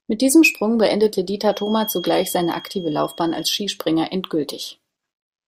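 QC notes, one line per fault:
1.40–3.61 s: feedback whistle. A thin, steady tone at 3.3 kHz sits behind the speech for just over two seconds, around 20 dB below it, swelling and fading slowly in level without building up or running away. The likely cause is a loudspeaker-to-microphone loop held right at the edge of instability, where gain at that one frequency is just enough to keep it ringing but not enough to make it grow.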